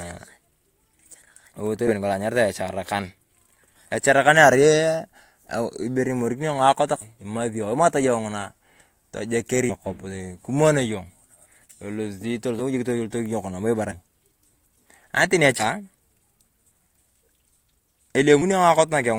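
Brief jumps at about 1.87, 7.01, 9.69, 13.91 and 15.59 s, each lasting a few tens of milliseconds, mark places where the speech lurches forward and a stretch of it never arrives. These are compressed frames skipped. Whole 20 ms frames are dropped, from about 7 to 30 at a time, losing roughly a tenth to half a second of audio per gap.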